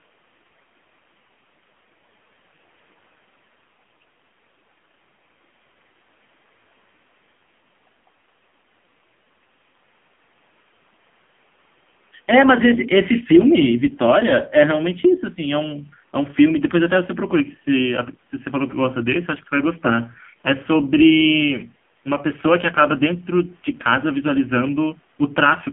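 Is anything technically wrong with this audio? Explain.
Yes. Throughout the speech runs through an AMR narrowband mobile codec, and the heavy damage points to one of its low modes, roughly 5.9 kbps. The band is confined to about 150 Hz to 3.4 kHz, so the voice sounds thin and muffled. At this rate the codec has too few bits to model the vocal tract well or place its excitation pulses precisely, which leaves the voice buzzy and synthetic, with a smeared, telephone-like roughness.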